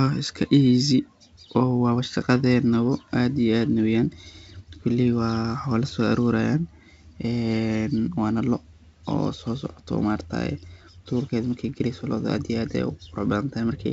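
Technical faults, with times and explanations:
Nothing here counts as a fault: the speech comes through G.722 wideband telephone coding at 64 kbit/s, which carries it up to about 7 kHz with at most a faint trace of the coding in the upper band.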